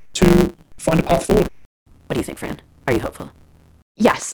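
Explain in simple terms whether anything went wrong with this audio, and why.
From start to finish, the speech rushes along about 1.6 times too fast but keeps roughly its normal pitch, over a steady buzz near 138 Hz. This is a block size mismatch (truncated): one stage writes longer blocks than the next reads, which fits 512-sample blocks, so each block's end is lost.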